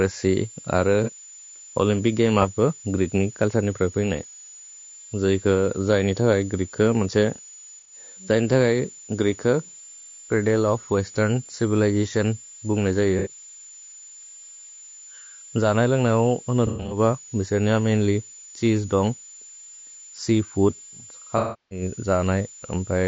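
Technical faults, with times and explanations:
Throughout: switching supply whistle. A thin, steady high tone sits near 7 kHz, drifting slightly between about 6.9 and 7.2 kHz, roughly 20 dB below the speech. A power supply's burst-mode switching gives this whine. Unlike a fixed mains hum, its pitch is high and wanders with load.
Throughout: low-delay AAC compression. The speech sounds rough and grainy, with noise filling the gaps between voice harmonics and a dull, synthetic-sounding top band. It is likely from AAC-ELD at 32 kbps, whose short frames resolve pitch poorly. The graininess is spread evenly, not confined to moments.
1.04–1.12 s, 7.79–7.93 s, 13.19–13.30 s: AAC frame loss with concealment. These are brief smeared, phasey patches lasting 30, 90 and 60 ms. The decoder rebuilt the missing frames from the last good spectrum, so the sound blurs rather than dropping out or clicking.
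16.67–16.99 s: AAC frame loss with concealment. About 180 ms is missing, scattered over 240 ms, with the longest run near a tenth of a second. It sounds like a noisy smear, with repeated concealment rather than one clean gap.
21.38–21.82 s: AAC frame loss with concealment. A 330 ms loss is too long to patch over, so the filled-in sound decays toward silence and then fades back in. This fade-out and return marks a long loss, as opposed to a short smear.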